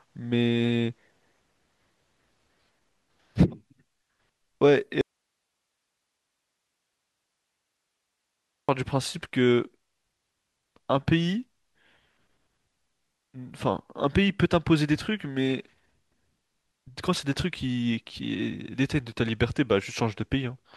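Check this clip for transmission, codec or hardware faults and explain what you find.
One fault is present: an audio dropout to a faint residue. From 5.01 s to 8.69 s the speech cuts off abruptly for about 3.7 s, leaving only hiss roughly 55 dB below the signal. The likely cause is a break upstream while the later path stayed live, so its noise floor carried through. The waveform shows a sudden near-flat stretch, and the spectrogram shows sharp vertical edges around faint broadband noise.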